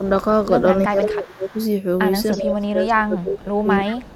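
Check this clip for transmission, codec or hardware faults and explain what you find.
Two faults are audible in this speech clip: repeated echo leak and speech suppressed in double talk.

Echo leak appears at 0.04–0.1 s, 1.01–1.05 s, 1.47–1.68 s, 2.31–2.41 s and 4.11–4.16 s. These are short, faint scraps of a delayed copy of the voice, mostly about 30 to 35 dB below the speech and rising to about 20 dB down at 2.31 s. The likely cause is a loudspeaker on the far side whose echo canceller let some of its microphone pickup through, which was then sent back. Room reverberation would smear the sound into a diffuse tail, but here each copy is a distinct repeat at the same fixed lag of 0.32 s.

Speech suppressed in double talk occurs at 0.86–1.57 s and 2.34–4.1 s, roughly 0.7 s and 1.5 s of affected audio. The voice dips by up to around 20 dB. This is likely an echo canceller that could not tell its own talker from the loudspeaker echo while both sides spoke, so it turned both down. 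Packet-loss dropouts would be abrupt gaps at random moments. These dips are partial, they last for stretches, and they coincide with the echo scraps at 1.01 s, 1.47 s and 2.31 s, which points to both sides being active at the same time.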